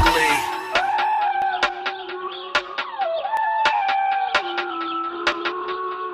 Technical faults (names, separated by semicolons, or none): audio missing between chunks